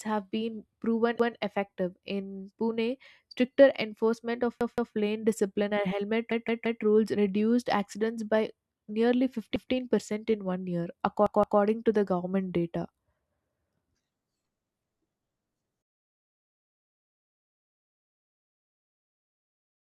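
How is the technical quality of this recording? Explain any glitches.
The speech is interrupted five times by a repeated buffer fault. At 1.20 to 1.37 s, just after "have been proven", a segment of about 171 ms plays twice. At 4.61 to 4.95 s it plays three times, and at 6.32 to 6.83 s four times. At 9.56 to 9.73 s, between "reduced accidents by nearly" and "in one year", it plays twice, and at 11.26 to 11.61 s, between "in one year" and "to the government data", three times. Each time, fresh audio missed its deadline and the device replayed its last block, which fits an 8192-sample buffer. The result is an audible stutter with a hard join at every repeat. The surrounding audio is delayed rather than skipped.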